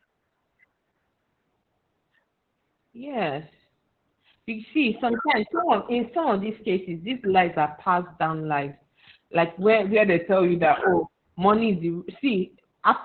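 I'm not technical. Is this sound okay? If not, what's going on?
No. Opus voice compression runs through the whole clip. The speech was squeezed very hard by a codec built for calls, which keeps only the lower part of the sound, about what an old telephone carries, and rebuilds each short slice of voice from a rough model. That is why it sounds muffled, hoarse and a little robotic, like a poor phone line.

A drift correction step shows up twice. From 4.9 to 7.12 s, after "you see" and up to "lies are passed down", the speech suddenly runs about 6% faster and sounds about a semitone higher, then snaps back. From 9.95 to 10.76 s, after "down lies like where" and before "oh money is", it runs about 6% slower and a semitone lower. This is likely software matching two clocks by briefly changing the playback speed.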